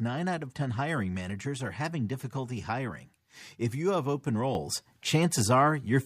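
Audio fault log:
4.55–6.05 s, sudden gain jump: at 4.55 s the speech and the background noise both step up by about 6 dB and hold that level to the end. The rise is instant rather than ramped, so this is not the gradual swell of automatic gain control or a speaker leaning closer, where the noise floor would lag or stay put. It is likely a gain setting or bit shift applied between consecutive samples without smoothing.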